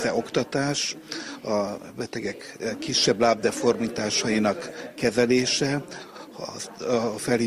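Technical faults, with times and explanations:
Nothing stood out on listening; no technical faults could be heard anywhere in the clip.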